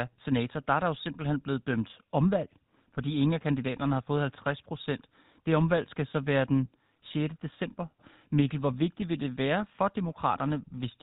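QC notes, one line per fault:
Throughout: GSM full-rate codec. The speech has a buzzy, gravelly roughness and nothing above 4 kHz, the sound of a vocal-tract model driven by sparse, regularly spaced pulses. The damage is plainly audible, which fits the 13 kbps full-rate coder.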